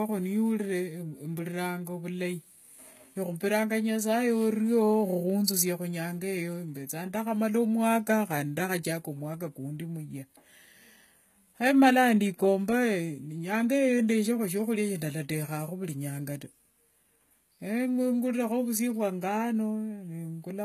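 From start to finish the speech carries gritty, lispy s sounds with a metallic sheen in the treble, likely from HE-AAC compression at a low bitrate near 20 kbps, where the upper band is copied up from below. A spectrogram shows a hard ceiling at 14.9 kHz and repetitive, blocky treble texture.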